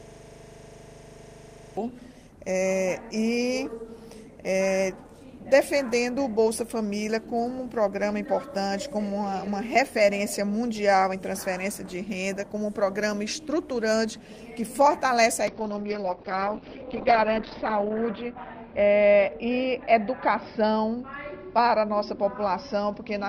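From the very start the system is already hung: the computer or driver has frozen while the sound hardware keeps replaying the same ring buffer. This system hang loop runs until 1.77 s. A 40 ms slice of audio repeats exactly, over forty times, at 25 Hz. Because the loop is so short, it comes across as a steady, rough buzz at that rate rather than a stutter. Normal sound resumes after 1.77 s.

At 15.48 s the call's bandwidth estimate falls and the encoder is pushed to far fewer bits, a call bitrate drop that lasts to the end of the clip at 23.28 s. The sound fits a fall from about 32 kbps to 7 kbps, which holds at its lowest for about 2.3 s. Coding turns coarse and watery, and the top end is cut from 20 kHz down to 6 kHz, leaving the audio dull and muffled.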